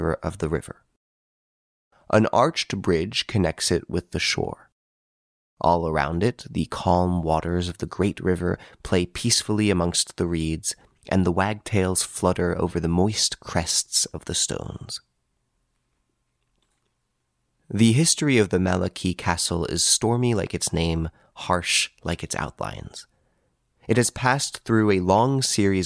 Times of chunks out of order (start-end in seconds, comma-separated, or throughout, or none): none